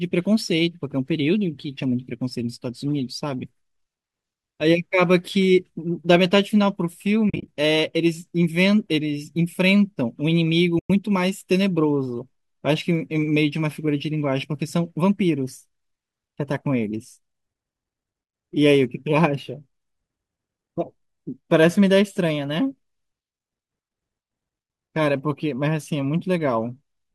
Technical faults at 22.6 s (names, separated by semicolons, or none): none